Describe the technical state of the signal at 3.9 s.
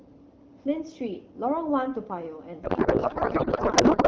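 At 3.9 s the speech is gone, replaced by garbled noise and warble that barely tracks the talker. This is a codec payload misread, running from 2.63 s to the end of the clip. The AMR wideband stream, clear at 12.65 kbit/s before the break, was packed in octet-aligned form but is being unpacked as bandwidth-efficient, so every field lands in the wrong bit positions and the decoder synthesises nonsense from valid-looking frames.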